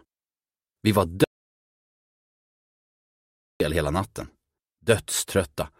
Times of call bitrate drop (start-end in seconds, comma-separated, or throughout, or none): none